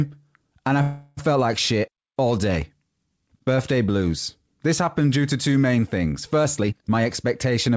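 At 0.82 s, right after "and I", the sound stops advancing and a fading buzz stretches the last sound for about 0.35 s, until "felt like shit all" resumes at 1.19 s. This call audio freeze was likely caused by packets stalling in transit and the jitter buffer running dry, so the receiver improvised continuation. Nothing is lost; the pause is inserted, pushing later audio back about 0.35 s. On a spectrogram the harmonics smear into flat, decaying horizontal bands; the waveform shows a shrinking, repetitive envelope.

From 6.44 s, after "to two main things", to 7.75 s, a jitter buffer speed-up runs the sound at about 121% of normal rate without raising pitch. Excess buffered audio was trimmed by repeatedly cutting out short stretches a pitch period or so long, removing roughly 0.3 s in total, so the phrasing sounds rushed and clipped. On the waveform, syllables look compressed in time. On the spectrogram, harmonic spacing stays the same while segments look shortened, with small seams where pieces were removed. 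Throughout, nothing appears above 8 kHz, consistent with the G.722 call path.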